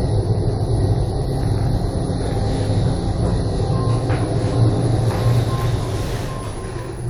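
No technical faults can be heard in this audio.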